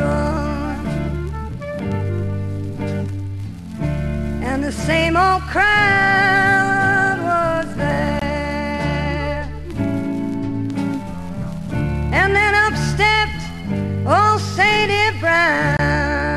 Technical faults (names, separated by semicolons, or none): gap at a join of encoded pieces